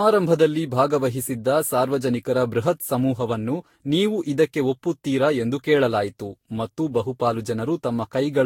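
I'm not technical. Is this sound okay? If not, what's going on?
No. The speech has a fault called generation loss, and it runs through the whole clip. It sounds swirly and hollow. Consonants and the starts of sounds are smeared. Nothing is left above 16.6 kHz, so the top sparkle is gone. The likely cause is that the recording was squeezed into a lossy format and unpacked around seven times. Each round added its own damage, and the damage piled up.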